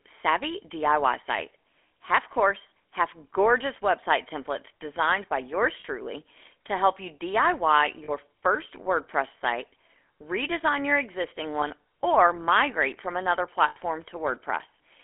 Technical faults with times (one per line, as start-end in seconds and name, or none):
0.00-15.04 GSM full-rate codec
5.80-5.85 lost GSM frames
8.04-8.11 lost GSM frames
11.60-11.68 lost GSM frames
13.68-13.77 lost GSM frames